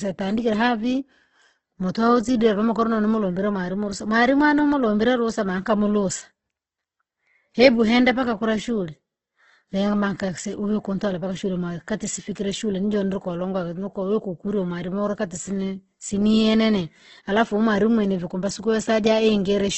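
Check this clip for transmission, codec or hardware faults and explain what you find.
There's one fault, running through the whole clip: Opus compression, likely at a low bitrate, which fits something around 12 kbps. Every band's energy is kept but filled with folded or noise content, so the speech turns rough and grainy, with nothing above 8.2 kHz.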